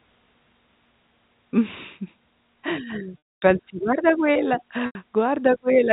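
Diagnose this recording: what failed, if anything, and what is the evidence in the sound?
The network stage failed, with packet loss and pitch repetition concealing it. At 3.24 to 3.42 s, about 240 ms is lost. The last pitch period repeats, fades to silence, then cross-fades back. At 4.86 to 4.95 s, a 90 ms loss sounds like a brief buzzy hold over the G.711 telephone band.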